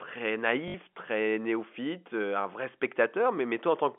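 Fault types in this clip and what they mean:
Packet loss with last packet repeated: From 0.68 to 0.74 s, 60 ms of sound went missing. The receiver replayed the last packet, giving a brief robotic stutter.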